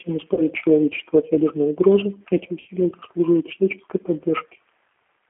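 Throughout, the G.729 codec shapes the sound. The band runs only from 300 Hz to 3.6 kHz, and the slightly rough, synthetic grain from rebuilding speech out of a filter, a pitch predictor and a few pulses, which fits an 8 kbit/s coder, is plainly audible. Plain low-pass filtering would sound dull but not artificial.

From 0.34 to 0.43 s, and again from 2.60 to 2.68 s, there is VoIP packet loss concealed by the speech codec. About 30 ms and then about 60 ms of signal, roughly one and two packets' worth, were missing. In their place the decoder repeats its last pitch and filter at falling gain, giving a fading buzz or coloured noise rather than a silent gap or click, and the sound stays weak briefly afterwards.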